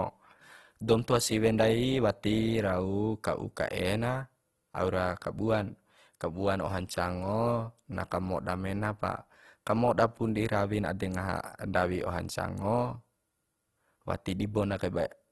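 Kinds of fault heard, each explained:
Opus compression: the speech sounds rough, grainy and noisy from start to end, likely from Opus coding in its music mode at a low rate that fits about 16 kbps. Bands are filled with noise, not left empty, so a spectrogram shows speckled texture and a hard ceiling at 12.2 kHz.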